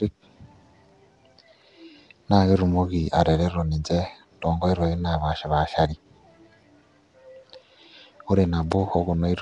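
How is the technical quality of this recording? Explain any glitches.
Quality is poor throughout. Nellymoser compression, likely Flash's Asao codec near 44 kbps, noise-fills starved bands, giving the speech a hissy, smeared, underwater tone. Spectrograms show speckled patches and nothing above 10.6 kHz.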